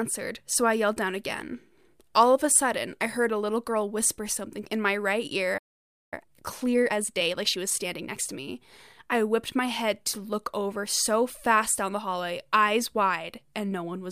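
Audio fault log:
5.57–6.14 s, playback stall: the speech halts mid-flow and the output sits silent for about 0.54 s before resuming. The cause is likely a player that ran out of buffered data or had its output thread blocked. Unlike a brief dropout or packet-loss gap, which clips a few milliseconds and moves on, this is a long, clean hole with no concealment noise, and the sound picks up again from where it stopped.
6.14–8.30 s, time-compressed catch-up: straight after the stall the speech runs at about 1.25 times normal speed for just over two seconds as the player works off its backlog. It drops small slices of audio and cross-fades the joins, so the speech sounds hurried. Unlike a simple resampling speed-up, the pitch stays at its normal level, and the pace settles back once the delay is recovered.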